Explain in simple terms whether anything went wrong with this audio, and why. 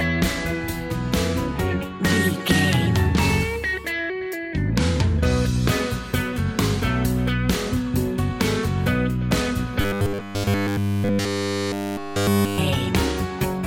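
From 9.81 to 12.58 s, new audio likely arrived too slowly, so one 10 ms slice looped nonstop, causing robotic sound from repeated short buffers: a rigid 100 Hz buzz.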